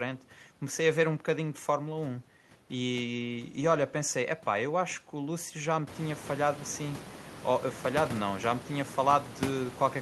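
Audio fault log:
Nothing wrong turns up in this speech; the room noise behind it climbs by about 19 dB from around six seconds in, but it stays about 14 dB under the speech and is simply the room.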